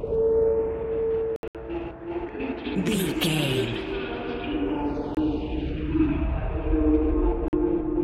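The sound cuts out in short silences with abrupt or briefly faded edges, then picks up further along as if it had kept playing: a stuttering patch from 1.36 to 1.55 s, with gaps totalling about 140 ms and the longest near 70 ms, then single holes at 5.15 to 5.17 s and 7.48 to 7.53 s. These are likely Bluetooth dropouts, where packets arrived too late and were discarded. The gap lengths fit lost packets of roughly 23 ms each.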